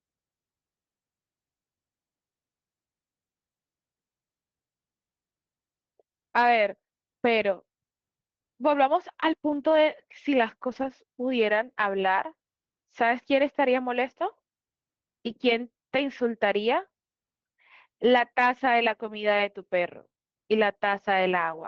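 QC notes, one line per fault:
7.37, 9.47–9.77, 10.67–10.89, 12.03, 15.97, 18.65 s: lost packet rebuilt from error correction. There are no gaps, but these stretches turn briefly rougher and noisier, 20 ms each except 160 ms and 120 ms. Each lost packet was replaced by a low-bitrate copy sent in the following packet. This is heard through an Opus call path limited to about 8 kHz.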